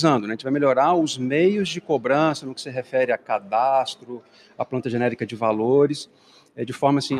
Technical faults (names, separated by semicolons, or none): noise suppressor applied to music or sounds; sound cut by the noise suppressor